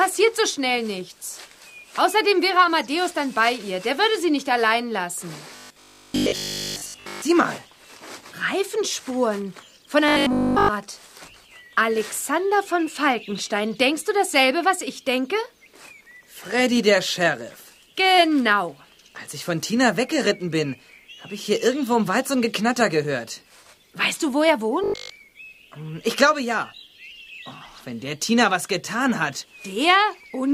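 From 5.56 to 7.22 s, 10.08 to 10.70 s and 24.84 to 25.16 s you get robotic sound from repeated short buffers: a stiff 50 Hz metallic buzz, likely from one 20 ms chunk looping in place of the real audio. The first two are fully looped. The last one mostly is.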